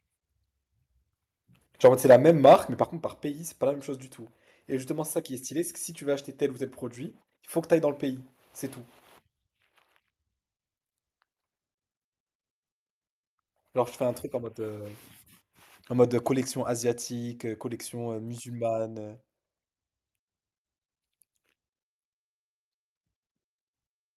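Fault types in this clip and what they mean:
Microphone overload, 1.84 to 2.55 s: for about 0.7 s the speech peaks drive the converter about 6 dB past full scale, so the top of each waveform is sliced flat, on roughly one sample in twenty. The flattened crests add a harsh, crackling grit to the loudest syllables. The likely cause is a microphone input volume set too high for how loudly the talker is speaking.
Microphone volume stepped down, 1.86 s and 2.85 s: the whole signal, speech and background together, drops abruptly twice, by about 4 dB at 1.86 s and about 7 dB at 2.85 s. Each drop is a single step, not a gradual fade, and the first lands just as the clipped stretch begins. This is likely the call software spotting the overload and cutting the device's input volume to stop it.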